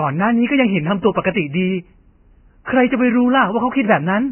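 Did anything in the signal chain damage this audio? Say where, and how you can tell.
Yes. Across the whole clip the speech sounds hissy and grainy, with a dull top end: nothing survives above 3 kHz, and what remains near that limit turns to rough noise rather than detail. That damage happened at the codec stage and is likely heavy Vorbis compression, at a rate that fits roughly 10 kbps. The encoder lowered its cut-off and quantised the remaining treble so coarsely that fine structure was replaced by noise of similar energy.

From 2.65 to 2.67 s there is a brief hiss, about 23 ms long, just ahead of a sharp attack, and the onset itself sounds softened and smeared. This is pre-echo, made at the same codec stage. The transform codec spreads its quantisation noise across a whole block. Because this attack lands late in its block, noise sized for the loud onset also fills the quiet moment before it, where nothing masks it.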